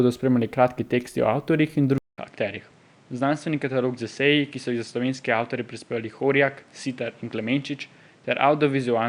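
At 1.98 s the speech cuts out for about 200 ms, then returns sounding different. From there to the end, nothing is heard above 10 kHz, so the top end is dull. The level drops by roughly 5 dB. A new background noise sits around 30 dB below the speech. The cause is likely an input switched to a poorer device mid-recording. The replacement device has a narrower band, its own level and its own noise floor.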